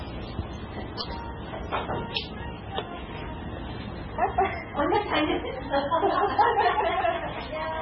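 Throughout the clip, an encoder short of bits has likely applied heavy MP3 compression, and the damage points to a bitrate around 16 kbps. Nothing survives above 6.4 kHz, so the sound is dull. Weak detail flickers between frames, giving a watery, swirling texture.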